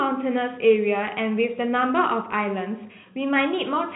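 No faults are audible anywhere in this speech clip.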